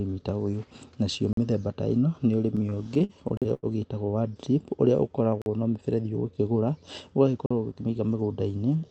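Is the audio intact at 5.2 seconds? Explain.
No, not quite. From about 4.78 to 5.60 s there's a jitter buffer slow-down. The receiver's buffer ran short or had just raised its target delay, so it stretched the audio by repeating single pitch periods and bits of pauses back to back to rebuild its reserve. That adds about 97 ms, so this stretch plays at roughly 89% speed. At 5.2 s the speech sounds slowed and drawn out, but the pitch stays the same.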